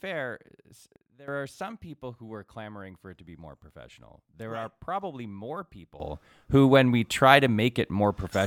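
Speech clip with two sudden gain jumps: the level, background noise included, drops by about 15 dB from 0.96 to 1.28 s, then leaps up by about 15 dB at 6.0 s and stays there to the end. Likely a gain setting applied instantly, without a ramp.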